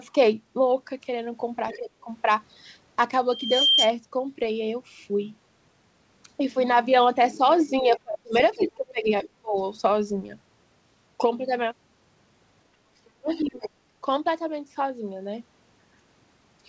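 A speech recording from a call, with echo-control and feedback faults. The echo canceller likely failed to remove the far end's loudspeaker sound, so the other side's voice leaking through is heard faintly at 1.7 s, 8.34 to 8.68 s, 13.05 s and 13.32 to 13.7 s, from about 15 dB below the talker down to about 40 dB below. When both sides spoke at once, the canceller likely could not separate its own talker from the echo and turned everything down. The result is speech suppressed in double talk from 1.77 to 2.07 s, 7.8 to 8.35 s, 8.55 to 9.56 s and 13.18 to 13.64 s, with the voice sinking by roughly 25 to 35 dB. From 3.31 to 3.95 s the microphone fed back through the loudspeaker. The loop gain passed unity at 3.2 kHz, producing a loudspeaker feedback squeal that swells over a fraction of a second to about 5 dB above the speech. Throughout, the audio stops at 8 kHz, consistent with a wideband call codec.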